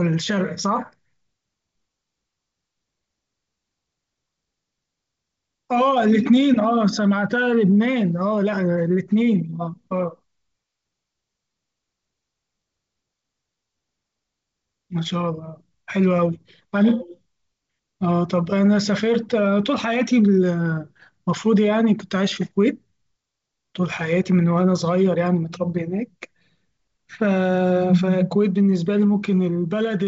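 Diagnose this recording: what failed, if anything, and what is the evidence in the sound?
Nothing in this speech recording points to a failure at any stage. The G.722 wideband telephone coding path is audible as a band limit with nothing above 7.8 kHz and at most a faint trace of coding, which fits the full 64 kbit/s mode.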